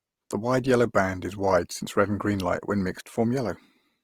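A speech clip carrying Opus compression damage from start to finish, plainly audible throughout. The voice has a rough, grainy texture, and the upper bands sound filled in with noise instead of carrying clean detail, yet the spectrum stays broad without obvious holes or swirling. That behaviour is likely the Opus music (CELT) mode rebuilding starved bands from folded or synthetic energy, and the degree of roughness fits a rate around 24 kbps.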